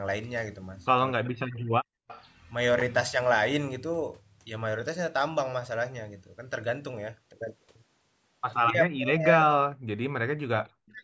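From 1.17 to 1.76 s the talker's speech sinks sharply, by roughly 40 dB at its deepest, for about half a second. This is speech suppressed in double talk: both sides were likely talking at once, so the echo canceller pulled the near voice down along with the echo.

At 2.04 s the background is gated by the echo canceller. The room sound drops out by about 34 dB for 40 ms, then returns.

Straight after, from 2.08 to 2.25 s, a faint repeat of the voice appears, delayed by 259 ms and roughly 20 dB below the speech. This is an echo leak, likely from a loudspeaker on one side of the call whose canceller let part of its microphone pickup back through.

The same double-talk suppression returns from 8.69 to 9.86 s, covering about a second, and again from 10.3 to 11.02 s. Each time the voice ducks by roughly 40 dB at its lowest.

Inside that last stretch, at 10.91 to 10.95 s, a brief echo scrap leaks through. 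It has the same 259 ms delay and sits roughly 35 dB below the speech.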